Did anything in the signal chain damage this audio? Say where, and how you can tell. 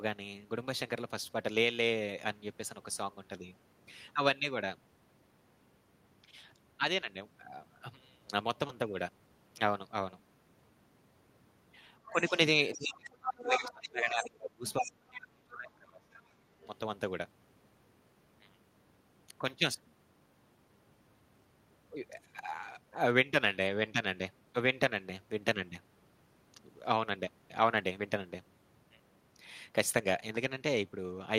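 Yes. Short concealed packet loss at 8.67–8.71 s is a network fault. About 20 ms of audio failed to arrive in time. The decoder extended the preceding sound to cover roughly 13 ms and then crossfaded back, leaving a brief smear rather than a clean gap.

The other side's voice leaking through appears at 12.06–12.30, 12.72–12.92, 13.26–13.84, 14.23–14.27, 14.67–14.86 and 16.60–16.67 s. It ranges from faint to nearly as loud as the talker. This is call processing: the likely cause is an echo canceller leaving loudspeaker playback in the microphone signal.

Speech suppressed in double talk is also a call-processing fault. The talker dips by about 10 dB at 12.10–12.35 s, then is pushed down as far as about 35 dB during 12.76–16.25 s, about three seconds in all. This coincides with the leaked far-end voice, likely because the echo suppressor attenuated both sides.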